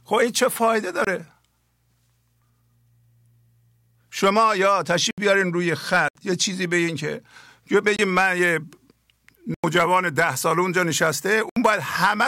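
At 1.05, 5.11, 6.08, 7.96, 9.54 and 11.49 s, the speech drops into a block of digital silence: the output buffer went unfilled and the samples became zeros. The gaps last 23, 70, 70, 23, 93 and 70 ms, with the 23 ms and 93 ms gaps matching missed blocks of 1024 and 4096 samples. Each starts and stops abruptly. All of them sound like short holes in the speech.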